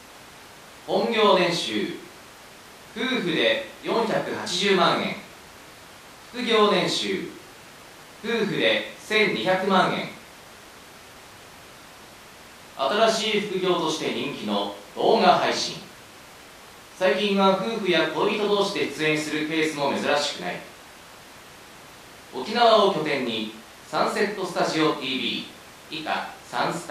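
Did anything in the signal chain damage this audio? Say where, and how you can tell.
No, nothing in the chain audibly damaged this speech.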